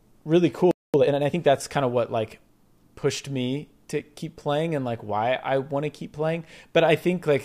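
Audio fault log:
0.71–0.94 s, playback stall: the speech cuts to silence mid-flow for about 227 ms, then resumes from where it stopped. The gap is most likely the player running short of buffered data or its output thread being briefly blocked, leaving nothing to send.
0.94–1.38 s, time-compressed catch-up: right after the stall the speech runs hurried at about 1.5 times normal speed but at unchanged pitch, just before "that's kind of what". Small segments are cut and cross-faded to clear the backlog the stall created.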